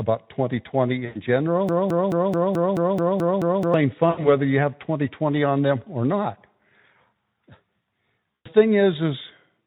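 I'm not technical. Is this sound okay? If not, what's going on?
No. VoIP packet loss concealed by the speech codec happens at 1.05–1.21 s, 4.10–4.29 s and 8.37–8.47 s. Chunks of about 80 to 100 ms of speech went missing, so the decoder guessed by stretching the last sound into a fading buzz or noise, and the speech sounds smeared briefly afterwards.

A broken-record loop runs from 1.69 to 3.74 s. A piece about 0.22 s long repeats back to back nine times, likely because the stream stalled and kept replaying its last fragment. Whatever should have been heard during those two seconds is lost.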